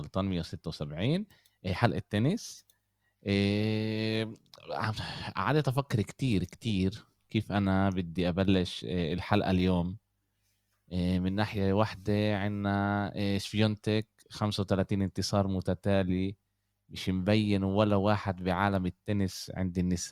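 From 9.1 to 10.6 s the speech picks up a faint hiss and roughness that rides on the signal itself, strongest on loud passages and bright consonants and gone in the pauses. This is sample clock jitter: the converter's timing wandered by around a microsecond or two, so each sample landed slightly off its proper instant. Steep, fast-moving parts of the waveform suffer most, leaving an error roughly 45 dB below the speech.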